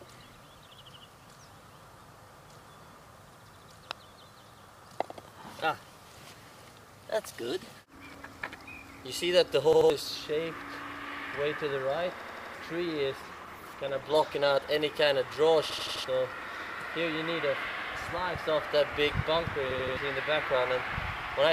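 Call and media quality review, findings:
Repeated buffer at 9.73, 12.20, 15.70 and 19.71 s: the same roughly 85 ms piece replays with hard joins, which fits a 4096-sample buffer that was not refilled in time. Identical repeats tell it apart from dropout silence. Roughly 0.15 to 0.3 s of audio is lost each time.

Call bitrate drop from 13.23 to 14.71 s: coarse, watery, muffled sound as the encoder falls from 128 to 14 kbps, lowest for 1.42 s. Continuous smearing without repeats or hard joins distinguishes it from buffer stutter.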